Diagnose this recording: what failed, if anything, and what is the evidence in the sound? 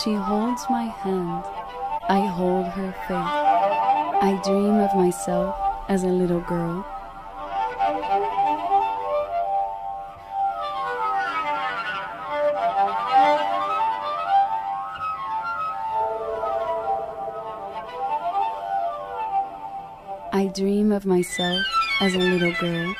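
At the codec, corrupt frames were decoded anyway: flipped bits put energy at wrong frequencies, giving short blips and noise bursts at 1.97–2.04, 4.12–4.15, 8.96–8.99 and 22.15–22.21 s.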